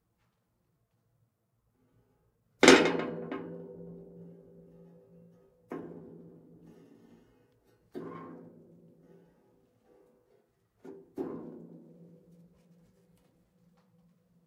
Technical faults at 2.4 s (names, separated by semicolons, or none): none